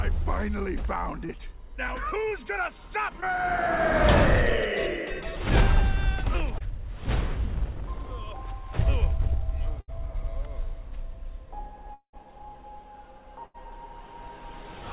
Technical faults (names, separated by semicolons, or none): short concealed packet loss; burst of packet loss; long network dropout